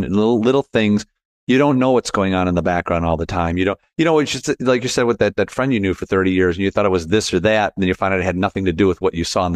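No technical faults can be heard anywhere in this speech recording.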